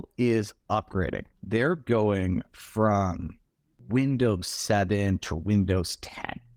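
No technical faults can be heard anywhere in this speech recording. Nothing interrupts or alters the sound at any point.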